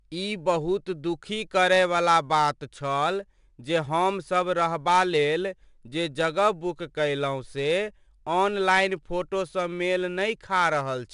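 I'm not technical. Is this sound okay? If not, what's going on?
No. The speech was saved with 4-bit ADPCM compression, an old, simple way of shrinking audio that stores each moment as a small guessed step from the one before. The guesses are rough, so a gritty hiss rides along with the voice from start to finish, loudest whenever the speech is loud, and sudden sounds come out rough. Nothing above about 10.7 kHz survives, which also takes some crispness off the top.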